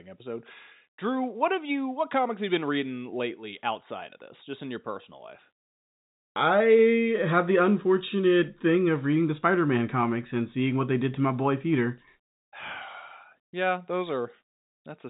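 Nothing technically wrong turns up in this speech recording, which has simply come over a G.711 telephone line and so carries nothing above about 3.8 kHz.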